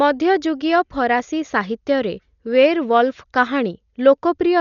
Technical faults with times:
0.00-4.61 Dolby Digital compression

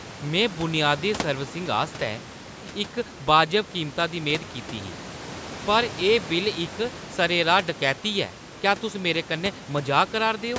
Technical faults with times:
none

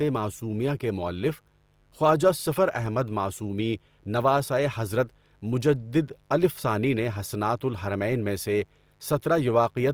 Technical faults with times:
0.00-9.93 mains buzz
0.00-9.93 Opus compression

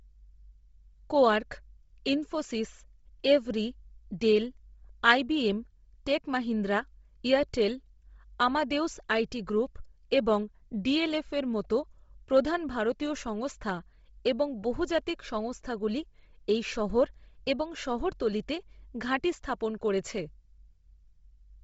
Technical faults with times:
0.00-21.64 Bluetooth LC3 compression

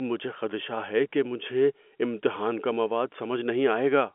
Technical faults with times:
none

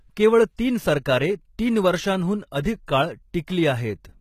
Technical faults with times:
0.00-4.21 HE-AAC compression
2.63-2.88 pre-echo
3.47 pre-echo

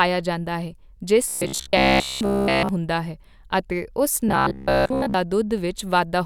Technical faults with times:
1.28-2.69 robotic sound from repeated short buffers
4.29-5.14 robotic sound from repeated short buffers

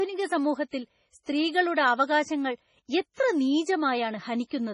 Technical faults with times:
0.00-4.73 MP3 compression
0.68-0.73 pre-echo
1.23-1.27 pre-echo
3.14-3.17 pre-echo

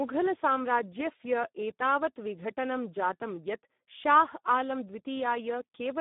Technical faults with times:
0.00-6.00 Speex codec

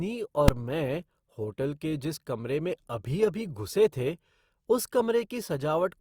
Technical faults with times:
0.48 invalid numbers at full scale

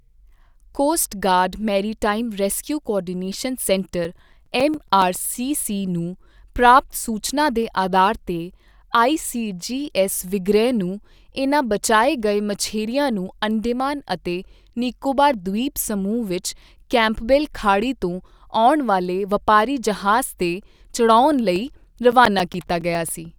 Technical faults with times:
3.77-5.16 CD scratch ticks
21.56-23.09 CD scratch ticks

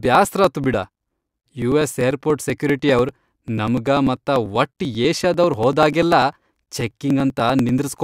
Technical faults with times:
0.05-7.99 periodic USB or driver dropouts

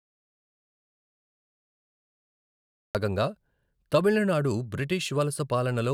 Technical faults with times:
0.00-2.95 audio dropout to silence

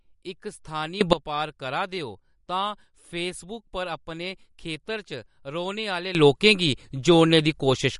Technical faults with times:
0.00-7.99 MP3 compression
1.01-1.13 sudden gain jump
6.15-7.99 sudden gain jump

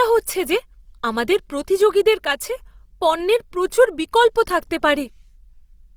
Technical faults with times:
0.00-5.96 Opus compression

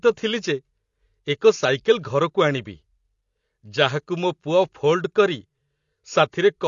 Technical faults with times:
0.00-6.67 AAC compression

